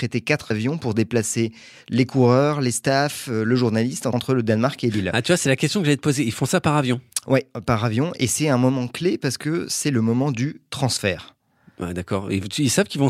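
No technical faults can be heard anywhere in this speech recording.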